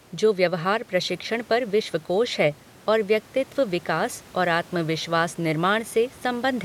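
A speech recording with no technical fault anywhere in it. The room noise behind it sits about 28 dB below the speech and belongs to the recording itself, not to anything in the system.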